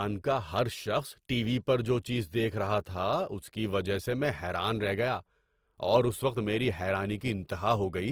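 Throughout, the speech sounds grainy and rough, with noisy tones, though content extends up to about 20.2 kHz. This points to Opus compression at a low bitrate, likely.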